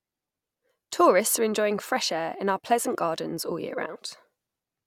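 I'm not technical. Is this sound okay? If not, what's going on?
No. After "pleasure gardens all year", at 3.95–3.97 s, compressed frames skipped: a few stored chunks, roughly 70 ms, never play, so speech jumps ahead.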